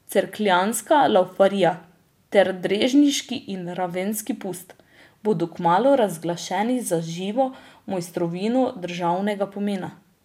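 Speech recording, with nothing technically wrong to point to at any moment.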